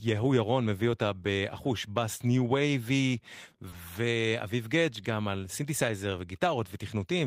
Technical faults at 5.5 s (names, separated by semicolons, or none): none